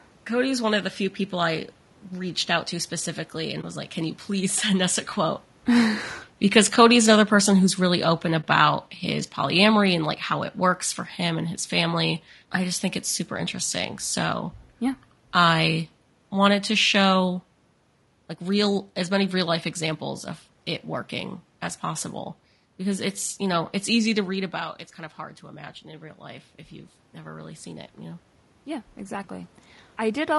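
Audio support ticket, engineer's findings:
Rough, grainy speech throughout, with noise between harmonics and a lowered or synthetic top band. Likely low-delay AAC compression (AAC-ELD). Damage fits a low bitrate around 32 kbps.

AAC frame loss with muting at 3.61–3.64 s and 8.42–8.44 s. Brief dips. Each fits one lost frame zeroed and faded through overlapping windows. Room noise and level shifts near 5 s and 24 s come from the room and talker movement.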